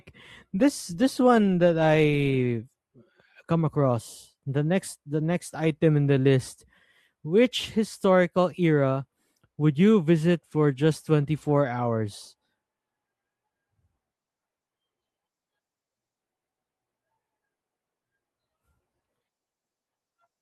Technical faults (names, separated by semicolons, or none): none